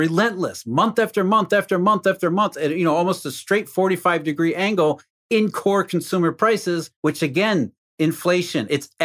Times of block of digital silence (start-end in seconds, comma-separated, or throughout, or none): none